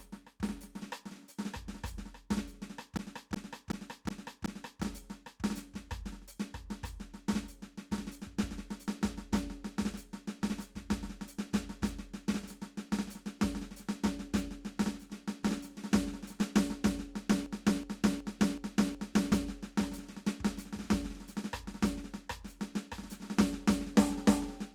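At 2.97 s and again at 17.46 s the music catches in a system hang loop lasting about 1.9 s each time. The computer stalled while the sound hardware kept replaying its ring buffer, so one 0.37 s slice repeats five times at 2.69 Hz, a stuttering that fits a 16,384-sample buffer. About two seconds of music are lost each time. On a waveform the identical blocks tile exactly, and a spectrogram shows the same short pattern stamped out repeatedly.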